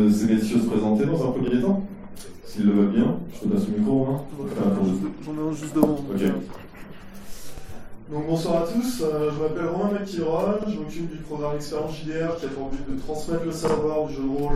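A short stutter appears at 1.48 s, then again at 7.58 s, 10.63 s and 13.68 s. Each is a case of overlapping chunks. The audio was handled in 3-second blocks, and each new block began before the previous one had ended. About 50 ms of sound at every join therefore plays twice. The repeat is heard as a brief click or hiccup, with the sound jumping back slightly before carrying on.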